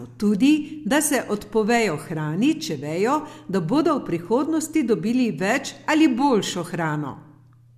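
Speech clip, no faults heard.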